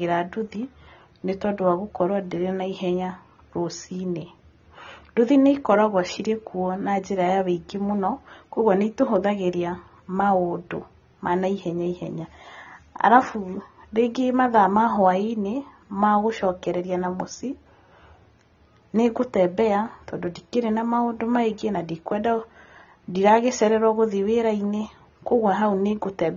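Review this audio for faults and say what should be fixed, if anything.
The speech is band-limited throughout, with nothing above 7 kHz, and sounds dull and smeared, with a warbling, fizzy texture on sibilants and held vowels. This is likely AAC compression at a low bitrate, which fits roughly 24 kbps. Encode at a higher bitrate, or keep an uncompressed master.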